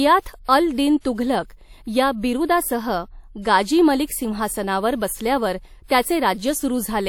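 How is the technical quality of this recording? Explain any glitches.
The recording has a codec problem: pre-echo at 0.44 s and again at 1.00 s. A short hiss creeps in about 40 to 50 ms before sharp onsets, smudging their attacks.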